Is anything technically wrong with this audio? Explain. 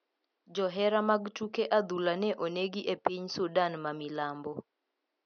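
No, nothing is technically wrong with this audio.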